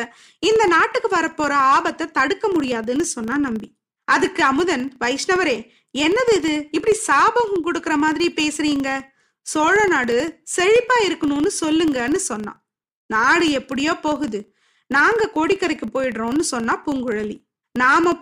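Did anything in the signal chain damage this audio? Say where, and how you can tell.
Yes. Throughout the speech there is a steady buzz at 25 Hz whose loudness rises and falls with the level of the talker, which points to a filter restarted on every block in the block-based processing stage. Each 40 ms block begins from a zeroed filter state instead of carrying over the previous block's memory, so every block boundary produces a small transient. Those transients repeat at the block rate and merge into the level-dependent buzz.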